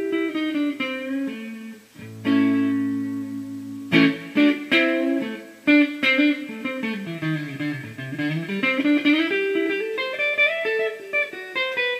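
No dropouts, clicks, distortion or level jumps are audible anywhere in the clip, and nothing in the signal path points to a fault.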